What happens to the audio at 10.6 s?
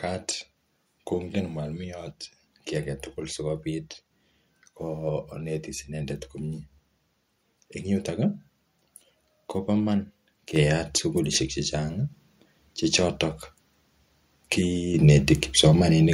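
At 10.56 s the microphone volume steps up by about 6 dB as input gain is raised at once, so speech and background jump together; the waveform envelope widens abruptly there.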